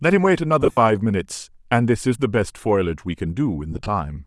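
Bluetooth LC3 compression runs through the whole speech clip: the upper spectrum sounds thinned and replaced by a grainy, breathy hiss on the speech, which fits the LE Audio transform codec at around 48 kbps with 7.5 ms frames as the likely cause.

Lost LE Audio frames occur from 0.62 to 0.77 s. The decoder filled the missing frames by repeating the previous spectrum with randomised signs, so the speech smears into noise. The gaps are scattered across 150 ms and total about 112 ms, which points to fifteen missing frames. The longest unbroken gap is around 70 ms, long enough to be heard fading.

The same fault returns from 3.73 to 3.88 s, lighter this time. The losses are spread over 150 ms and total about 75 ms, which points to ten frames. Each gap is very short, so the result is a brief noisy roughening rather than a fade.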